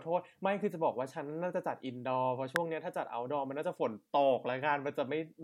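A speech recording with a single electrical switching spike at 2.56 s: a sharp, very brief snap peaking fairly high, around -10 dBFS, sitting on top of the speech. It is likely an arc from a nearby switch, motor or static discharge picked up by the audio line.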